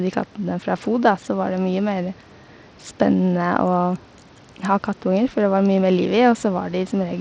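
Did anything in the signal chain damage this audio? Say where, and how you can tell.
Yes, at the codec stage, across the whole clip. The damage is plainly audible and fits Bluetooth SBC compression, likely over a link of about 80 kbps: with few bits for its wide sub-bands, the top bands thin out and the speech picks up gritty quantisation noise.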